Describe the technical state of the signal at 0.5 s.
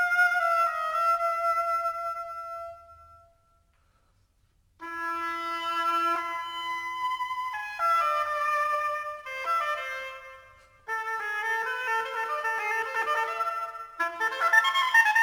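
At 0.5 s you're hearing crude rate conversion, and it runs through the whole clip. It sounds like a 44.1 kHz to 48 kHz change done by just repeating nearest samples, so an inharmonic gritty fizz sits roughly 25 dB down, tracking loud, bright moments.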